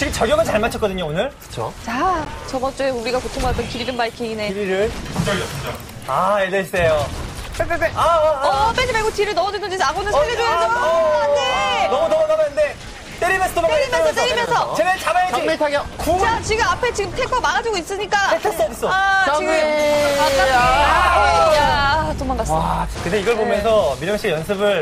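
At 2.25 to 2.27 s and again at 14.46 to 14.48 s, a corrupt frame decoded produces a brief chirp, squeak, blip or burst of noise peaking near -15 dBFS. Flipped bits misplaced energy across frequencies, and the lengths point to about two damaged frames, then one.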